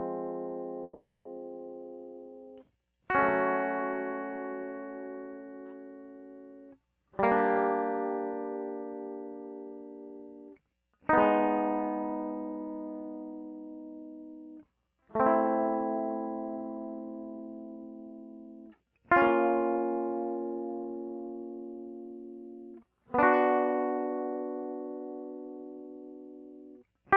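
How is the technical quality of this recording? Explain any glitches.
The music has one clear break near the start, heard through a call codec whose top end stops around 12 kHz, which fits Opus at a modest bitrate.

Long network dropout, 0.83 to 1.27 s: the sound is likely cut by a stretch of lost audio, about 420 ms. The receiver keeps smearing the last music into a fading buzz, then roughly 210 ms of silence follows before the music resumes further on, with that passage gone. Unlike a brief packet-loss blip, it runs long enough to decay into silence.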